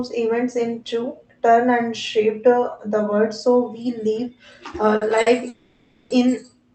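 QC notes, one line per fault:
4.96 s and 5.21 s, short stall from a late packet: each time a speech sound hangs on for about 50 ms with a faint buzzy smear, then picks up exactly where it left off. A packet arrived late, the jitter buffer ran dry, and the receiver stretched the last sound to cover the wait.
5.48–6.11 s, call audio freeze: the speech stops moving forward and the last sound drags on as a fading buzz for about 620 ms without ever dropping to full silence, then resumes from the same point with nothing lost. The likely cause is packets held up in transit, emptying the jitter buffer while the receiver filled the gap. The call codec's band limit is at 8 kHz.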